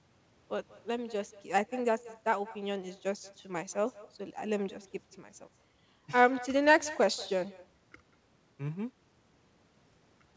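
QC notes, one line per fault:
Throughout: echo with no canceller. Each phrase is followed about a fifth of a second later by a fainter copy, roughly 20 dB down, that sounds thinner than the direct speech. The far end's loudspeaker output reaches its microphone and returns over the call path uncancelled. Unlike room reverberation, which decays smoothly, this is a distinct delayed repeat. Both the speech and its echo stop at 8 kHz, which fits a wideband call codec.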